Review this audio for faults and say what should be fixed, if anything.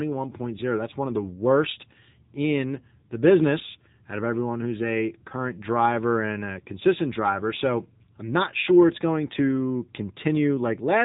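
The speech carries AMR narrowband mobile codec damage for its whole length. Nothing above about 3.8 kHz survives, and the plainly audible buzzy, synthetic texture comes from a vocal-tract model excited by sparse pulses per 5 ms, which fits a mode near 7.95 kbps. To prevent it, capture or route the audio over a wideband or uncompressed path rather than a narrowband mobile call.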